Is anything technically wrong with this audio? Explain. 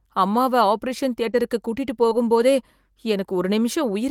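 Yes, there's short concealed packet loss at 1.31 to 1.35 s and 2.09 to 2.13 s: about 20 ms dropped each time, patched by extending the previous sound, leaving a quick smear.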